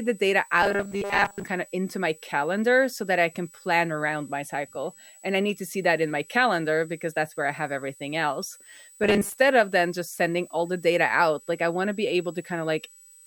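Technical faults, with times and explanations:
Technical faults, with times and explanations:
Throughout: switching supply whistle. A switching power supply in the signal chain is cycling at an audible rate, leaking a thin, steady whistle between 7.8 and 8.0 kHz into the recording at about 25 dB below the speech. The small spread in pitch comes from the supply's switching frequency wandering as its load shifts.
0.63–1.44 s and 9.04–9.37 s: robotic sound from repeated short buffers. The likely cause is audio arriving too late for playback, so the software fills each gap by replaying the most recent fragment. Most of the real audio in these stretches is lost. The fragments repeat at 200 Hz, which fits a buffer of about 5 ms. That fixed repetition rate imposes a rigid, metallic buzz that only loosely follows the speech.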